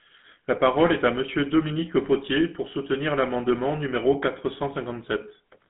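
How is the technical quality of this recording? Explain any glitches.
The recording's quality is limited by one fault present for its whole length.

GSM full-rate codec, from start to end: the speech is rebuilt from a vocal-tract model driven by regularly spaced pulses, which fits a 13 kbps GSM stream. Only 150 Hz to 3.5 kHz gets through, with nothing above 3.8 kHz, so it sounds muffled, buzzy and plainly gravelly.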